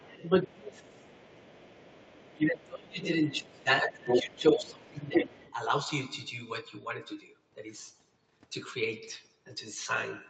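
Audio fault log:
0.00–0.13 s, 0.42–1.15 s, 2.33–3.04 s, 3.22–5.36 s, speech suppressed in double talk: the talker's level sinks while the far side is playing on the loudspeaker, by about 15 dB in the first span, about 30 dB in the second and third, and about 20 dB in the long fourth. The likely cause is an echo canceller that could not tell near speech from loudspeaker echo during overlap and attenuated both, so the talker dips, thins or drops out in pieces.
0.98–2.37 s, 3.44–3.63 s, 4.07–4.71 s, 5.14–5.54 s, other side's voice leaking through: a second voice sits under the talker, about 30 dB down in the first span and about 35 dB down in the second, then roughly as loud as the talker in the last two. This is likely far-end audio from the talker's loudspeaker reaching the microphone and not fully cancelled. It shares the band limit of the call path, with nothing above 8 kHz.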